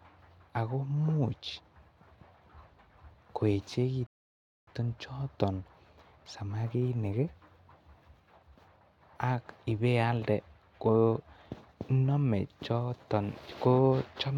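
A rebuffering stall at 4.07 to 4.67 s: playback ran out of downloaded audio, so the speech drops to silence for 0.61 s and then resumes exactly where it stopped.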